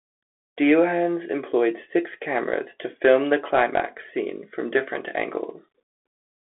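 The speech has been carried through a Bluetooth CVSD headset codec for its whole length, which encodes the signal as a single up-or-down bit per sample with an adapting step, consistent with a 64 kbps link. The result is narrowband: the voice sits in a telephone-like band of roughly 300 Hz to 3.4 kHz with nothing above 3.8 kHz. The coding damage is plainly audible as granular roughness, with s sounds scratchy and loud bright passages distorting.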